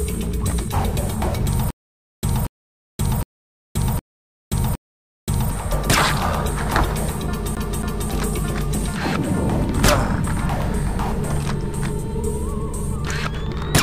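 From 1.70 s to 5.51 s there's a stutter with silent gaps. A short burst of about 236 ms plays, then about 526 ms of dead digital silence, and the same burst comes back. That happens five times on an even 762 ms cycle. The likely cause is the player or stream stalling and replaying its last fragment on each retry before running dry. Whatever should have played through that stretch is simply gone.

Then at 7.55 s, running to 8.10 s, it turns into a CD stuck on one turn. A 273 ms slice repeats twice, with a quick mute at each jump back. That's the tight, regular skip you get when a scratch keeps knocking the laser back a track at the same point on every rotation. The loop is much quicker and choppier than the earlier stutter.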